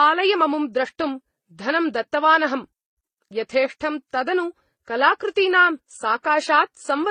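Throughout the speech, the audio was likely passed through a chain of lossy codecs, transcoding from Vorbis to MP3 to HE-AAC, each at a low rate near 24 to 39 kbit/s. The different codecs' artefacts stack up and are heard together, with nothing above 20.6 kHz.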